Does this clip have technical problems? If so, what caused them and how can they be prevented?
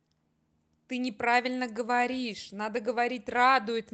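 No, there are no technical problems in this speech clip. It has passed through a call path, and its high frequencies stop at about 8 kHz, which fits a call codec such as Opus running at a wideband setting.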